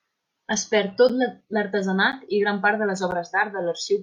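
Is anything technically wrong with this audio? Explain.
Yes, there's a gap between stream segments at 1.09, 2.12 and 3.11 s. The segments are 1 s long and their timestamps leave small holes that the player fills with silence, so you hear brief, hard-edged dropouts of roughly 7 to 10 ms in the speech, about once a second.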